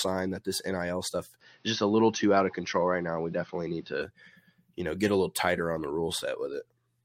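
The input was likely switched to a poorer device from 1.41 s to 4.02 s, with no gap at either change. The speech loses everything above 6.2 kHz and turns duller, with a faint new background hiss, while the level stays about the same.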